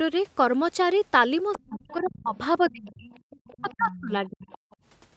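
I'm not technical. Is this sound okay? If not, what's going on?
No. The echo canceller likely left in some of the far end's voice. That's the other side's voice leaking through, faint, at 1.54–1.78, 2.06–2.37, 2.94–4.02 and 4.48–4.76 seconds.

When both sides talked at once, the canceller likely turned everything down. That's speech suppressed in double talk: the main voice nearly vanishes at 1.56–2.35, 2.58–3.09 and 3.56–4.47 seconds.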